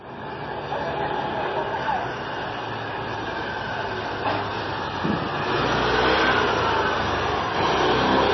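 From start to finish the audio carries heavy damage of the kind left by MP3 compression, which is the likely cause. Nothing is present above 5.9 kHz, so the top end sounds dull and closed in. The encoder appears to have run short of bits, which fits a bitrate near 24 kbps, so it dropped the treble and zeroed weak frequency lines. Those lines flicker on and off between frames, giving the texture a watery, swirling quality.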